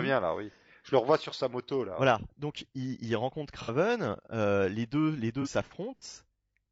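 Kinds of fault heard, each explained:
Low-delay AAC compression: Present throughout this speech, and plainly audible as a rough, grainy texture, likely from a low-delay AAC codec of the AAC-ELD kind used in video calls. Its very short frames capture the fine harmonic structure of the voice poorly. At a bitrate that fits about 32 kbps, the encoder cannot spend enough bits, so noise fills the gaps between harmonics and the upper band sounds thinned or synthetic.
AAC frame loss with concealment: Heard at 3.62 to 3.70 s and again at 5.42 to 5.47 s as brief smeared, noisy patches where the sound briefly loses its definition. When compressed frames go missing, the decoder covers the gap by reusing the last good spectrum with altered phase or interpolated energy, producing a blurred stand-in rather than silence. The first gap, about 60 ms, fits two lost frames. The second, about 30 ms, fits one.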